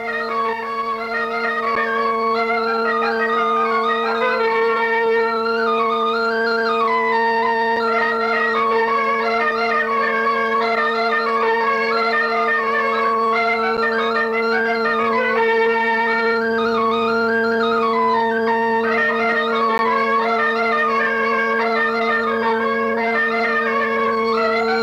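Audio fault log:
1.75 s, 7.76 s, 13.77 s, 19.78 s: gap between stream segments. Short hard-edged silences of 10.2, 4.7, 9.4 and 12.9 ms recur every 6.0 s, where segment time stamps leave a hole that playback fills with silence; no audio is lost.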